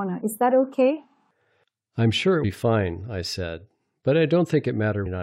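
Damaged data in a compressed stream appears at 2.43 s, between "I'm sure it" and "fine I said", and again from 5.05 to 5.07 s. Corrupted bytes garble those frames, so the decoder loses sync and hunts for the next header, producing brief glitches.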